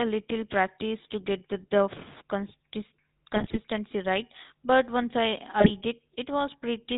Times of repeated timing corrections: none

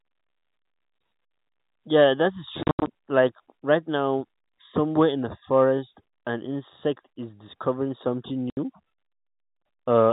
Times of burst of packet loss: none

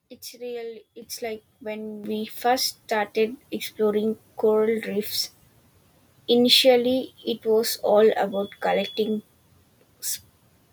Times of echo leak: none

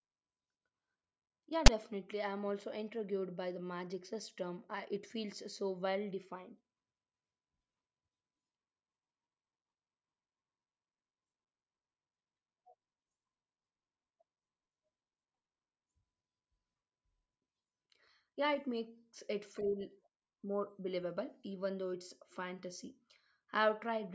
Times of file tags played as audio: 1.66

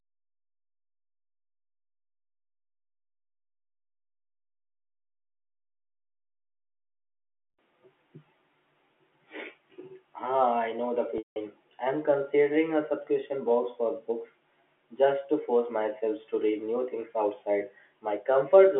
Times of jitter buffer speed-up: none

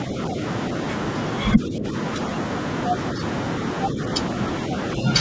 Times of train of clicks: none

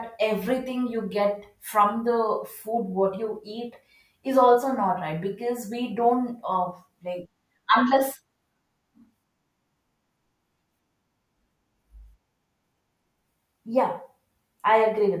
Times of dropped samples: none

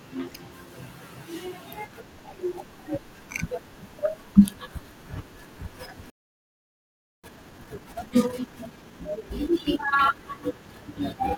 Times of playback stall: 6.10-7.24

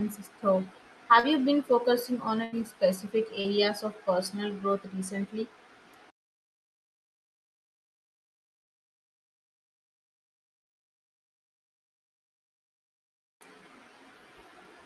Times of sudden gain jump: none

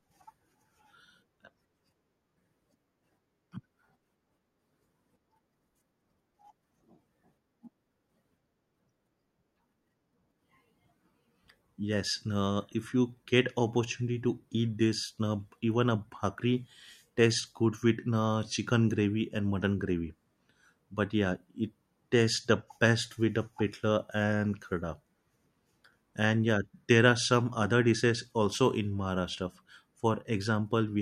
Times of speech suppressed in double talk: none

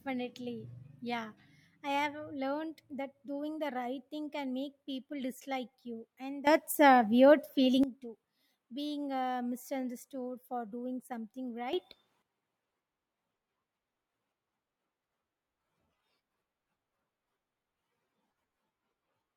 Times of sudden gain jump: 6.47-7.83, 11.73-12.22

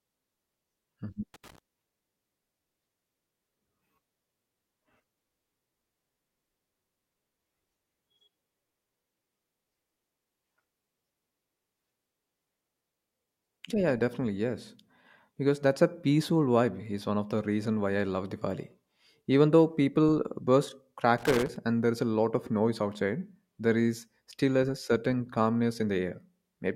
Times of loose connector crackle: 1.34-1.58, 21.18-21.56

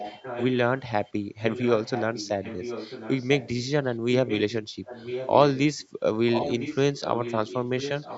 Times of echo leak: 0.00-0.57, 1.05-5.88, 6.27-8.17

